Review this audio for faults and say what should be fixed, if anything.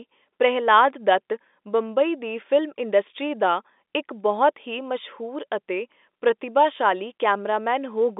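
Nothing here needs fixing: the speech carries the expected narrow band of G.711 telephone coding, about 250 Hz to 3.6 kHz with no content above 3.8 kHz, which is simply the normal character of a fixed-line phone channel.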